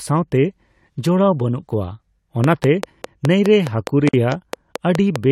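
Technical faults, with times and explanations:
2.44–5.17 s, train of clicks: about fifteen regular pops, 4.9 per second, peaking about 15 dB over the speech, likely from interference; thin vertical spikes on the waveform and spectrogram.
4.09–4.14 s, gap at a join of encoded pieces: a 47 ms gap from leftover encoder delay and padding, seen as a dropout with smeared edges and blank spectrogram column.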